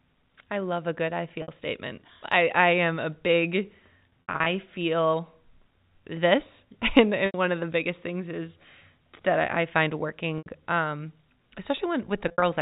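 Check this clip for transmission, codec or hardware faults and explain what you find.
Five brief dropouts mark this speech clip, over a G.711 telephone path whose 4 kHz band limit is audible. At 1.42 s (60 ms), 4.27–4.46 s (160 ms scattered), 7.26 s (80 ms), 10.38 s (80 ms) and 12.28–12.42 s (100 ms), the sound briefly holds a buzzy, frozen tone before resuming. This is packet loss with pitch repetition: the receiver loops the last pitch period to fill missing packets, consistent with 20 ms packets.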